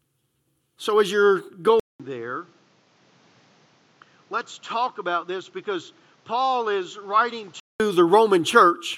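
At 1.80 s the speech cuts out for 200 ms. It returns duller and noticeably quieter, with nothing above 7.6 kHz. A faint new background noise appears. This is likely an input switched to a poorer device. Full clarity returns at 7.80 s.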